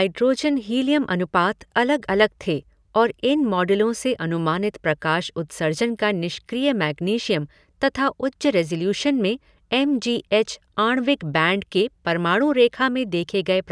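Nothing goes wrong anywhere in this speech recording, so there's no technical fault to point to at any moment.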